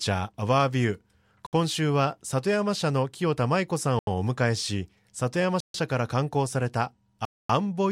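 The speech drops out four times. Each gap is dead silence, and each is longer than the last: 1.47 to 1.53 s (64 ms), 3.99 to 4.07 s (81 ms), 5.60 to 5.74 s (138 ms), and 7.25 to 7.49 s (243 ms). The sound stops abruptly and then carries on. This points to a Bluetooth stall, likely from radio interference delaying packets. The headphones' buffer empties and playback halts until the resent data arrives.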